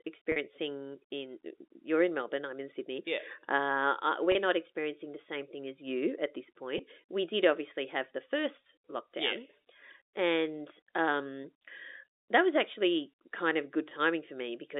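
Speech heard over a narrow telephone band shows packet loss with pitch repetition at 0.32–0.36 s, 4.32–4.35 s (between "uh uh" and "not experiencing"), 6.78 s, 11.43 s and 13.89–13.91 s. Each 10–40 ms gap is filled by a looped pitch period that sounds briefly held and buzzy. On a spectrogram these look like short patches of frozen, evenly spaced harmonics, and on a waveform like identical repeated cycles.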